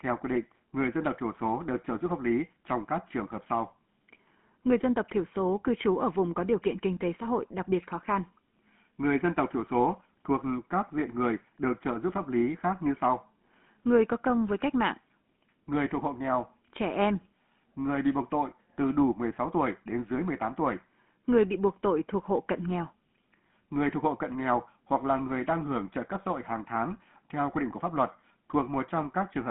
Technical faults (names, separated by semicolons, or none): GSM full-rate codec